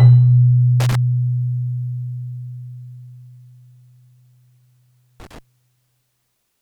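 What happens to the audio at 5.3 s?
At 5.3 s there is loose connector crackle. It runs from about 5.20 s to 5.39 s, roughly a fifth of a second. A worn or dirty contact somewhere in the signal path is shifting, so the connection keeps breaking and remaking. Each break chops the sound off, and each remake snaps it back. Any DC offset on the line turns those jumps into pops. The result is a brief, irregular burst of scratchy crackle over the sound.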